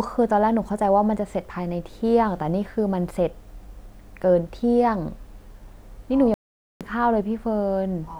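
At 6.34 s the speech cuts to silence for 0.47 s, resuming at 6.81 s: a playback stall, likely the player starving for data or its thread being blocked.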